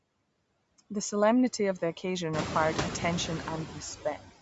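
From the start, the noise suppressor is working hard, pulling the background down by about 20 dB between phrases. The whole clip also has a grainy, breathy edge on the upper frequencies, likely from Bluetooth LC3 compression at a modest bitrate, while the call's microphone processing stops the band around 8 kHz. Near 2.5 s the room noise steps up by about 16 dB. From 3.68 to 3.81 s the suppressor mistakes part of the speech for noise and dips it by up to about 6 dB for around a tenth of a second, so that bit sounds swallowed.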